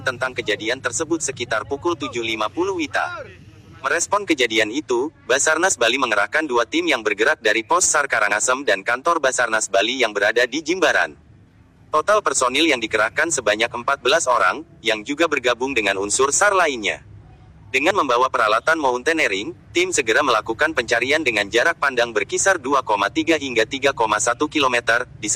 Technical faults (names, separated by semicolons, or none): compressed frames skipped